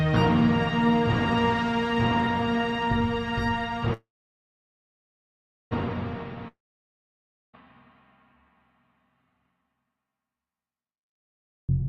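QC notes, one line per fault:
3.93 to 5.73 s, call audio freeze: Packets were likely held up in transit, so the jitter buffer ran dry and the receiver had nothing new to play. It stretched the last sound into a brief fading buzz, then left about 1.66 s of silence. When the packets arrived, playback resumed exactly where it had stopped, so no audio is lost. A gap of about 1.8 s has been inserted, pushing everything after it later by that amount.
6.48 to 7.55 s, long network dropout: A stretch of incoming audio likely never reached the receiver, so roughly 1.06 s of the original was never played. The receiver extended the last fragment as a fading buzz for a moment, and about 0.98 s of silence follows. Unlike the freeze, the audio resumes further along, so the sound jumps forward past the part that went missing rather than continuing from the break.
10.91 to 11.83 s, jitter buffer speed-up: The buffer had built up more audio than its target. 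To shed that backlog, the receiver repeatedly cut out tiny pitch-period-sized slices, removing about a fifth of a second in total. The result plays at about 125% speed with the pitch unchanged. This final stretch sounds rushed and compressed in time, without the chipmunk rise you would get from simply playing it faster.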